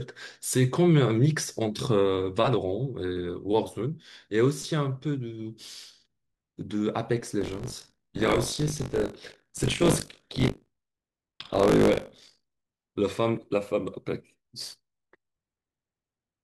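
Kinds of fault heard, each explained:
Buffer tearing: the writing program and the playback hardware have drifted out of step, so each 20 ms buffer ends up with roughly a fifth holding audio from a lap earlier, some 40 ms stale. Hard joins produce a robotic 50 Hz buzz over the speech from 7.4 to 12.6 s.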